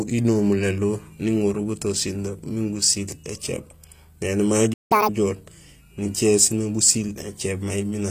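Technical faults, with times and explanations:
Throughout: HE-AAC compression is the likely cause of the plainly audible coding damage. The lower spectrum is coded directly, and the treble is rebuilt by copying lower bands upward under a coarse envelope, so sibilants sound gritty and metallic while staying bright. The damage fits a low bitrate around 24 kbps. On a spectrogram, the upper band shows blocky, repeated texture with harmonics that fail to line up across the crossover.
4.73 to 4.92 s: A playback stall, likely caused by the player running out of data or having its thread blocked, cuts the speech off mid-flow for about 170 ms of silence before it resumes. The break is long enough to hear clearly as a dropout rather than a click. On the waveform it appears as a flat silent gap with abrupt edges, and on a spectrogram as a clean vertical blank stripe across every frequency.
4.92 to 5.09 s: Catch-up at higher speed follows straight after the gap. 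The player resamples its backlog at 2.0 times normal speed to recover the lost time, so for this short stretch the speech runs twice as fast and jumps roughly ten semitones higher in a chipmunk-like burst, then drops back to normal. On a spectrogram the harmonics and formants shift sharply upward and compress in time. On the waveform the cycles are visibly squeezed.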